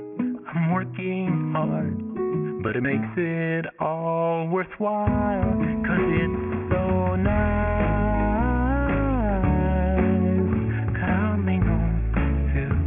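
Aliasing runs through the whole clip. Content above about 3 kHz was not filtered out before the rate was reduced, which fits a drop to around 6 kHz, so it folds back as unrelated tones roughly 20 dB below the sound, leaving a gritty, metallic edge.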